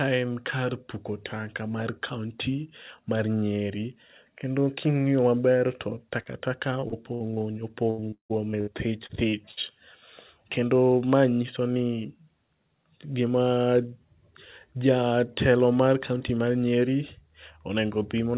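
Short concealed packet loss at 6.22 s, right after "kendo king'i maber to": about 40 ms of the call arrived too late to decode. The receiver bridged the hole by extending the preceding sound, from its pitch where voiced and as shaped noise where not, then cross-faded back into real audio. The result is a brief smear.

Repeated packet loss (robotic sound) from 6.80 to 7.34 s: four separate gaps, the longest about 58 ms, together account for roughly a quarter of the stretch. Each is patched by continuing the last sound, and the next dropout follows closely, so the speech turns choppy. The same fault returns more heavily from 7.90 to 8.69 s, with six gaps, one lasting about 157 ms, and nearly half the span synthesised. The robotic, broken quality is much stronger there.

Short concealed packet loss occurs twice more, at 9.07 s (about 20 ms) and at 9.29 s (about 40 ms), each heard as a quick smear or wobble where the concealment papers over the missing piece.

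A burst of packet loss at 9.51 s removes about 60 ms in one run. The receiver holds the last sound and fades it down, so voiced speech becomes a short held buzz and unvoiced parts a dying hiss. The audio then resumes further along, with the material in between gone. Throughout, nothing is heard above 4 kHz, which points to a narrowband telephone codec such as G.711.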